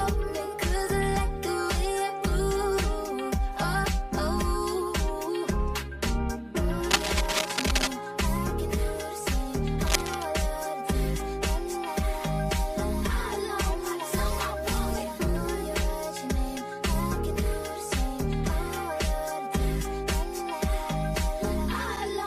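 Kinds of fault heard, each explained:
Channel delay (comb filtering): one channel trails the other by around 5 ms, so the mono sum notches near 100 Hz and at even intervals above, sounding hollow throughout.
Cable scratch noise: dense, ragged scratching at 6.90–7.87 s, roughly as loud as the sound, and 9.84–10.25 s, a little quieter, likely from a worn connector being moved.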